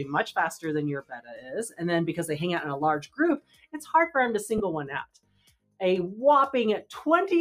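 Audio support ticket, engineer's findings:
Noise suppressor applied to music or sounds: speech-tuned suppression left active on non-speech material, treating sustained tones, ambience and reverb as noise. Gain swings around 15 dB throughout; attacks pass, held parts and tails sink, giving audible pumping and a thinned sound.

Sound cut by the noise suppressor: 1.02–1.52 s, 3.38–3.75 s, 5.05–5.80 s. Same suppressor classifying these stretches as noise and clamping them hardest, down about 20 dB at the deepest (about 21 dB in the last). Sustained and decaying content drops away; tails end early.

Lost LE Audio frames: 4.58–4.61 s, Bluetooth LE link dropping audio. Gap of 20 ms, consistent with two 10 ms LC3 frames; decoder concealment repeats the previous spectrum with randomised phase, so tonal content briefly smears into a noisy burst.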